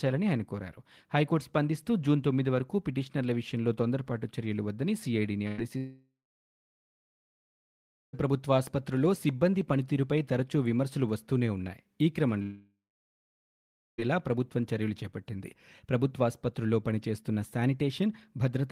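At 5.47 s, a burst of packet loss removes about 100 ms of speech. The receiver stretches the last sound across the gap, fading it down. It is heard as a brief held buzz or hiss. Speech then resumes with that piece missing.

From 5.78 s to 8.25 s, the sound stretches into a fading tone, then falls to about 2 s of silence. About 2.4 s of speech is lost. The same happens from 12.42 s to 14.00 s, with about 1.6 s lost and about 1.2 s silent. Both are likely a long network dropout.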